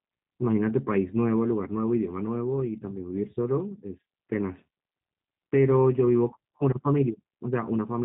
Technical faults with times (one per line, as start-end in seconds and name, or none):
0.00-8.04 G.729 codec